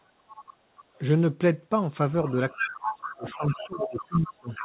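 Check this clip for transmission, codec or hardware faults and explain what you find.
Two faults are present, both consistent with loudspeaker echo on the talker's end of a call.

Other side's voice leaking through appears at 0.29–0.54 s, 0.76–1.02 s, 2.25–2.31 s, 2.5–2.8 s and from 3.03 s to the end. The likely cause is an echo canceller leaving residual loudspeaker pickup in the microphone signal. The first three scraps sit well below the main speech, roughly 20 to 30 dB down. From 2.5 s the leak rises to only about 5 to 10 dB under the talker.

Speech suppressed in double talk runs from 2.53 to 4.48 s, overlapping the loudest leakage. When both sides talk at once, the canceller likely cannot tell near speech from echo and attenuates everything. In this clip that produces dips of up to around 25 dB, totalling about one and a half seconds, so the main speech fades and drops out in pieces while the second voice continues. 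The audio is band-limited to 4 kHz, as expected for the G.711 A-law call path.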